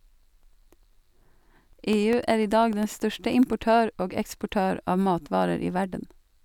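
From 0.13 to 3.63 s, periodic USB or driver dropouts silence roughly half-millisecond slices every 0.1 s: evenly spaced ticks, unlike random clicks.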